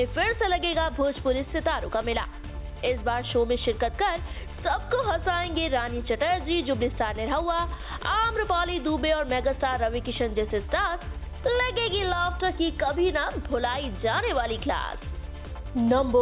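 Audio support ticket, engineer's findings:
No faults found on listening; no dropouts, distortion, timing or level problems identified that would point to a failing component in the playback or capture chain.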